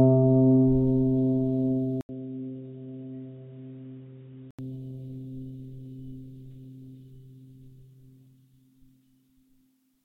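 At 2.01 s the music drops out for 80 ms, then returns dull, quieter and with faint background noise, with nothing above 3.8 kHz. Likely an input switched to a poorer device.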